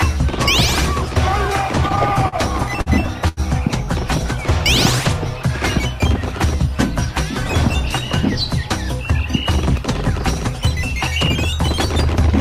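From 1.75 to 2.89 s, repeated stalls (stutter): the jitter buffer kept emptying, and eight held fills totalling 147 ms (longest 50 ms) drag the sound, showing as smeared, stretched bands. At 3.28 to 3.40 s, a short stall from a late packet holds the sound for 87 ms, seen as a flat, repeated stretch in the waveform.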